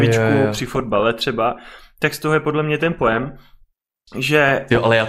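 From 0.67 to 1.06 s, 2.80 to 3.27 s and 4.48 to 4.85 s the speech carries DAB burbling: residual bit errors corrupt MP2 samples and scale factors, so wrong samples produce short blips of noise in single sub-bands and wrong scale factors make individual sub-bands jump in level for up to a frame.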